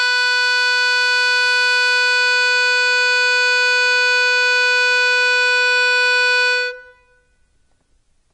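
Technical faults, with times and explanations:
throughout MP3 compression: a bit-starved encoder, likely near 32 kbps, removes everything above 10.6 kHz and flickers weak frequency lines, leaving the music dull, watery and swirly.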